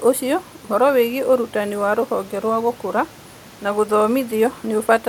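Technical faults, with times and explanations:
No technical faults detected.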